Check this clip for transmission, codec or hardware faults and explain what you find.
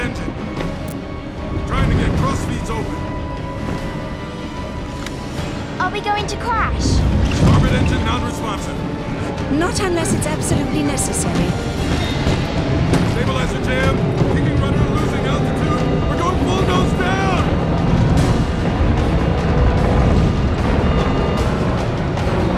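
One fault is present: an electrical switching spike from 0.88 to 0.92 s. For about 40 ms a sharp snap, peaking at about -10 dBFS, sits on top of the sound and does not belong to it. This is most likely a nearby switch, motor or static discharge arcing and coupling into the audio line. On the waveform it appears as a thin, abrupt spike. On a spectrogram it is a narrow vertical stripe running across the full frequency range.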